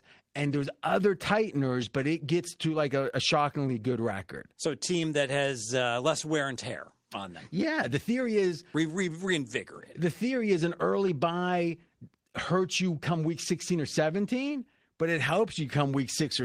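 Listening through the speech recording, nothing stood out as a technical problem.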